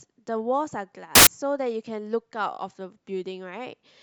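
Samples built from the wrong bytes appear from 1.15 to 1.27 s: for about 0.1 s the reader assembles each speech sample from misaligned or swapped bytes, so rapidly changing low-order bits dominate and the passage becomes a burst of loud, harsh broadband noise.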